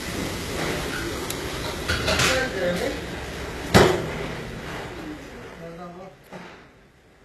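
A recording of sounds, with plainly audible coding damage throughout. The treble is gritty and metallic, and its upper harmonics do not line up with the lower ones. That points to HE-AAC compression, likely at a very low bitrate around 16 kbps, where the top band is rebuilt from copied lower bands. On a spectrogram, the upper region shows repeated, blocky patches under a coarse envelope, and nothing appears above 12.3 kHz.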